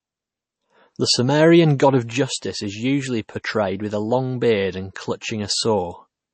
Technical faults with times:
0.00-6.33 MP3 compression

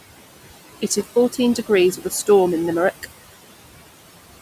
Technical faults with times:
0.00-4.42 noise suppressor artifacts
0.91-1.25 intermittent contact

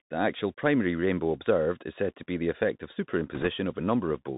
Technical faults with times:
0.00-4.37 Bluetooth CVSD headset codec
3.35-3.47 bit errors on a Bluetooth voice link

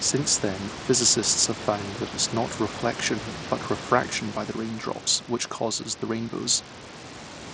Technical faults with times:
0.00-7.54 Bluetooth SBC compression

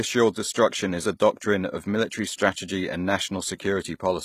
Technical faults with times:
0.00-4.24 HE-AAC compression

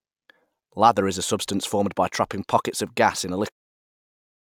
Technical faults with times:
none

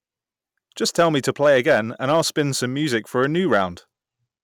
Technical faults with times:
0.99-2.41 hard clipping
2.94-3.62 hard clipping

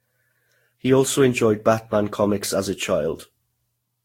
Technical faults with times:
0.00-4.05 generation loss

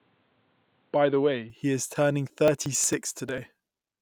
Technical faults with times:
0.00-1.50 input switched to a poorer device
2.30-3.92 periodic USB or driver dropouts

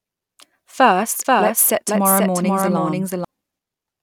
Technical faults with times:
1.25-3.25 doubled audio track

